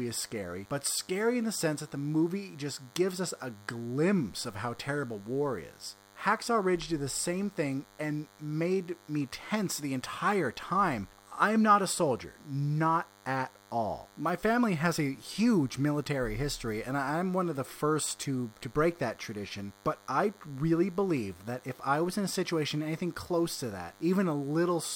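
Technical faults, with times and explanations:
Throughout, DECT cordless phone buzz: a steady 100 Hz buzz rich in harmonics, about 30 dB below the speech, from rectified radio bursts every 10 ms.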